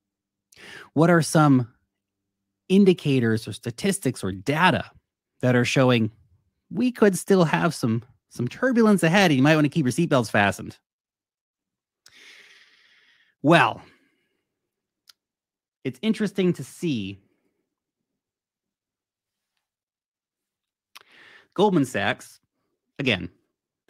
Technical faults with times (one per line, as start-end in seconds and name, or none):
none